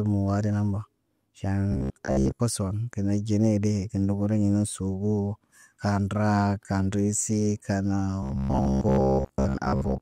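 From 1.72 to 2.40 s, and again from 8.23 to 10.01 s after "raa kaan riisi kaan", the speech becomes a rigid 66.7 Hz metallic buzz: robotic sound from repeated short buffers, likely from late-arriving audio, with 15 ms segments looping over most of the signal.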